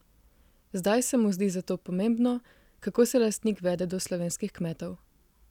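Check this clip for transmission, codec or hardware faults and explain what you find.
No faults can be heard anywhere in this speech recording. Nothing in it calls for further explanation.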